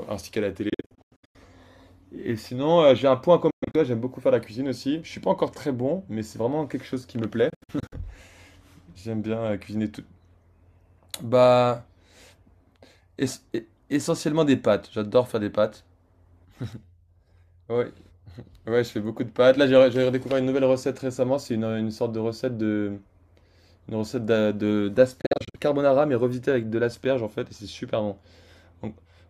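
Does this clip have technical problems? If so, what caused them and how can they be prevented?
Yes. The speech cuts out in short gaps at 0.69–1.36 s, 3.50–3.76 s, 7.50–7.94 s and 25.21–25.56 s. The longest single gap is 116 ms. This is likely a Bluetooth dropout, with late packets discarded. Keep the source close to the headphones.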